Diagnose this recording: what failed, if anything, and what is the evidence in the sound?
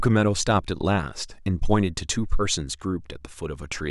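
Nothing failed in this recording.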